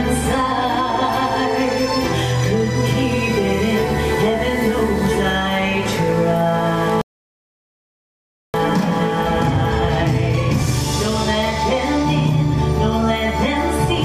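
At 7.01 s the sound cuts abruptly to silence and stays silent until 8.54 s, when it resumes from exactly the point where it stopped. This is a rebuffering stall: the player exhausted its downloaded audio and waited for more to arrive, adding about 1.53 s without dropping any material. On a waveform this appears as a flat gap; on a spectrogram it is a clean vertical blank band with continuous content on either side.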